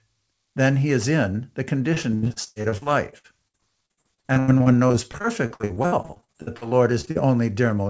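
Just after "he is in the", from 1.94 s to 7.17 s, repeated packet loss (robotic sound) sets in. Dozens of short holes, the longest 78 ms, are each patched by stretching the preceding sound, so about a third of the span is filled-in sound. The result is choppy, with pieces missing. Unlike a single dropout, the holes recur steadily across the whole stretch. The band stops at 8 kHz, which fits a wideband call codec.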